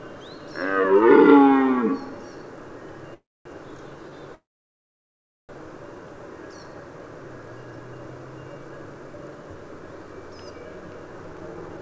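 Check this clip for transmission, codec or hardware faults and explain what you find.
Two kinds of fault turn up here: a pair of call audio freezes and a jitter buffer speed-up right at the end.

Call audio freezes at 3.14 to 3.47 s and 4.35 to 5.51 s. In each, the sound stops being live, a short fading continuation of the last sound trails off, and then there's silence, about 0.24 s in the first and about 1.08 s in the second, before the audio resumes right where it left off. The likely cause is packets stalling in transit so the jitter buffer ran dry. Nothing gets lost, but 0.31 s and 1.14 s of extra delay get pushed into the stream.

Jitter buffer speed-up from 11.33 to 11.78 s. Holding more audio than it aims for, the receiver trims it back by cutting out lots of tiny pitch-period-sized slices in quick succession, roughly 70 ms in total. Playback runs at about 115% speed while the pitch stays put, so that last half-second comes across as noticeably rushed. 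Under all of this, the G.722 call path at 64 kbps leaves nothing above 8 kHz.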